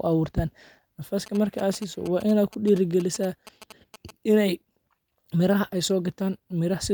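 From 1.26 to 4.11 s, GSM signalling bursts, rectified phone pulses, gallop as dit-dit-dit ticks and 217 Hz buzzes in groups, not a call's continuous buzz.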